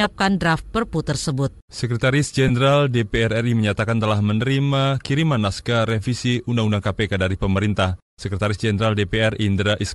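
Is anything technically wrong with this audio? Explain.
Yes, there are two problems. Throughout, the speech has a grainy, breathy edge from plainly audible Bluetooth LC3 compression, likely from coarse 7.5 ms transform coding; a spectrogram shows noise-filled, patchy upper bands. From 2.48 to 2.51 s, lost LE Audio frames leave a brief noisy smear, consistent with about two frames being concealed by reused spectra with random signs. The waveform shows a short blurred patch, and the spectrogram a smeared vertical stripe.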